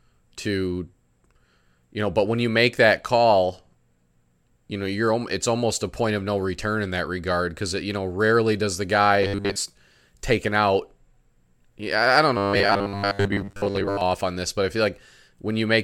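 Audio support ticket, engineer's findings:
Robotic sound from repeated short buffers: 9.23–9.57 s after "know rarely does the", and 12.37–14.01 s after "I don't", before "on this but I". Rigid 100 Hz buzz over speech. Likely starved audio path replaying one 10 ms chunk, losing most real signal.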